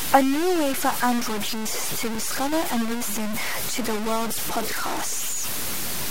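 Low bit depth without dither runs throughout the speech, likely from truncation to about 5 bits, leaving grainy distortion nearly as loud as the signal that makes quiet passages gritty.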